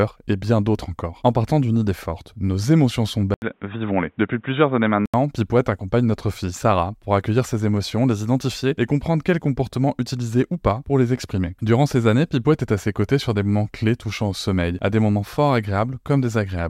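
Speech, with a brief input switch to a poorer device from 3.34 to 5.14 s, right after "forte nos émotions sont". An 80 ms gap precedes dull, band-limited sound with nothing above 3.8 kHz, new faint background noise, and unchanged level. That gap and noise, unlike a plain filter, likely mark a device change.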